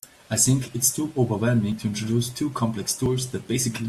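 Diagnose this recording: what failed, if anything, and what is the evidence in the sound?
Dropped buffer (overrun) at 0.68 s, 1.72 s and 3.06 s: each is a jump where the speech skips ahead with no silence. They fall just before "it’s too", just before "to introduce two", and just after "to introduce two". The skipped stretch grows from about 20 ms to about 40 ms, then about 70 ms. This likely points to the driver or buffer stage: the application fell behind, the hardware overwrote samples before they were read, and the surviving audio was butted together.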